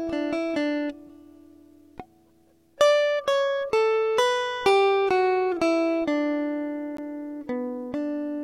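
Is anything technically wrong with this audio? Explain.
Yes. At 6.97 s the music drops out for about 14 ms. This is a gap between stream segments. The timestamps of two segments, which look about 6 s long, leave a small hole that the player fills with silence. The result is a brief, hard-edged break with nothing lost.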